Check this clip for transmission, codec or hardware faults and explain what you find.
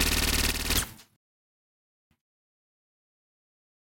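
Three faults affect this recording of everyday sound. From 0.51 to 0.69 s, one channel drops out. The level steps down by about 6 dB, likely because one stereo channel was lost before the mono sum. The sudden step sets it apart from a gradual fade.

From 1.16 to 2.11 s there is a playback stall lasting about 0.95 s. The output goes completely silent, likely because the player ran short of data. The sound then resumes.

From 2.11 s to the end comes time-compressed catch-up. Small pieces are cut and cross-faded, so the sound runs 1.15 times faster. The pitch stays unchanged, which distinguishes it from a plain speed-up.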